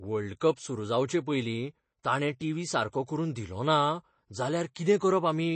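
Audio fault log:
throughout: MP3 compression, likely at a low bitrate around 32 kbps; nothing above 8.3 kHz, leaving the speech dull, with watery, swirling texture on sibilants.
2.03 s: pre-echo, about 10 ms of hiss smeared ahead of the attack before "ताणे टीव्ही सारको करून", as block-wide quantisation noise fills the quiet lead-in.
2.39 to 2.41 s: pre-echo, roughly 12 ms of noise preceding the onset between "जावचेपयलीं ताणे" and "टीव्ही सारको करून", softening the attack.
4.74 to 4.76 s: pre-echo, about 16 ms of hiss spread before a sharp onset, blurring its edge.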